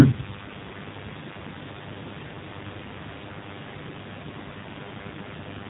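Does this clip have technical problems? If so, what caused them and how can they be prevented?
Yes. A mains buzz runs through the whole clip, fairly loud at roughly 15 dB below the speech. Its rasp comes from sharp switching spikes riding a 50 Hz mains cycle, which produce a dense ladder of harmonics well into the kilohertz range. That rasp is what sets it apart from a smooth, low sinusoidal hum. To prevent it, keep dimmers and rectifier-based supplies off the audio circuit and use properly shielded, balanced cabling.

The speech has also passed through the AMR narrowband mobile codec for its full length, and the damage is plainly audible. Nothing above 3.8 kHz survives. Beyond that missing top end, the voice has a buzzy, synthetic texture from the codec's pulse-driven vocal-tract model, which points to a low AMR-NB mode around 7.4 kbps. A simple band-limited telephone line would sound dull but still natural. 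To prevent it, record locally or use a wideband call path at a higher bitrate.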